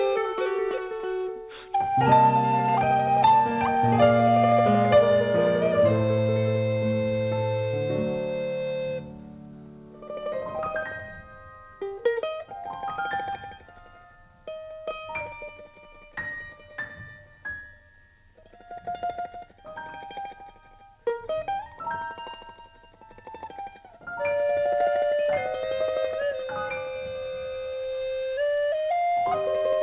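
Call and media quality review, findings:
No faults found; the audio shows the narrowband character of a normally working WebRTC call path, with nothing above 4 kHz and coding noise that fits G.711 A-law at 64 kbps.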